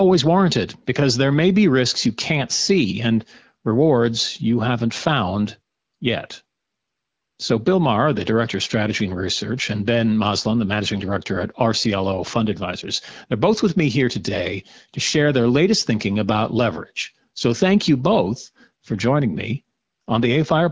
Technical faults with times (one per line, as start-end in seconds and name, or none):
none